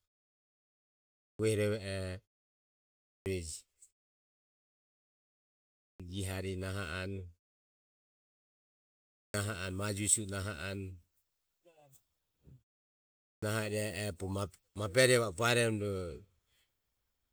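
Clipped start after a pause at 0.91, 2.82, 5.51, 8.93 and 12.96 s in this speech: each time the output device sleeps through the silence and wakes too late, swallowing about 0.41 to 0.49 s, so the speech snaps in abruptly without its onset. The pauses themselves simply go quiet.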